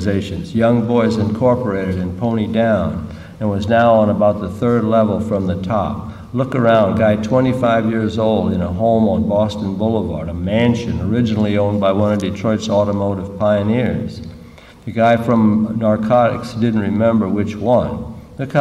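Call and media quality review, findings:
No faults found in this sample. Nothing to escalate.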